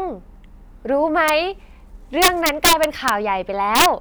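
Integer overflow strikes at 1.28 s, from 2.22 to 3.09 s with the level pushed about 7 dB over the limit, and from 3.75 to 3.86 s at about 3 dB over. The peaks wrap to the opposite sign instead of limiting, producing violent cracks that show as sudden vertical jumps in the waveform and broadband spectrogram streaks.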